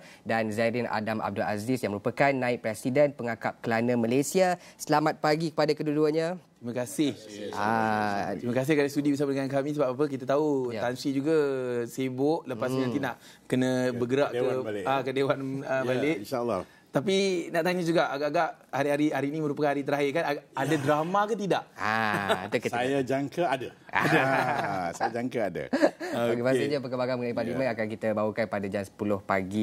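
From 4.05 to 5.01 s, and again from 17.20 to 17.72 s, the sound abruptly runs about 5.6% fast and rises by 95 cents, just under a semitone, then drops straight back to normal speed and pitch. Both shifts are drift correction steps, likely from clock-matching software that briefly raised the playback rate in a single jump to adjust its buffer, moving speed and pitch together before snapping back.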